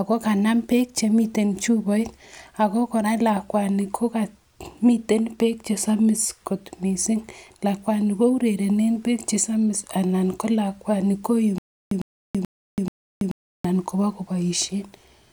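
From 11.58 to 13.65 s, a stream stall likely caused stutter with silent gaps: one 102 ms fragment repeats four times, with 331 ms of silence between.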